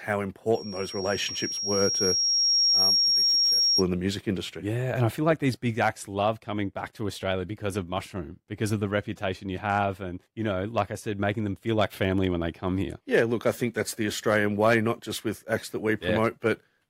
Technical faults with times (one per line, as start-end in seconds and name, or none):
0.54-3.83 loudspeaker feedback squeal